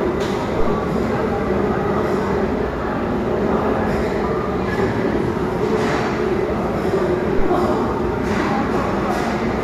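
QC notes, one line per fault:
7.39–7.48 s, phantom power thump: a deep, low-frequency thump peaking at about -8 dBFS that dies away within about 21 ms, as a supply is switched on or off on a live input and the voltage step passes through the coupling capacitors. It is a single smooth low swell and decay, unlike the wideband rustle and irregular rumble of handling noise or the sharp, bright click of a digital discontinuity.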